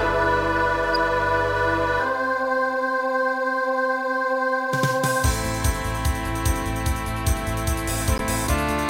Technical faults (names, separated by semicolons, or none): corrupt frame decoded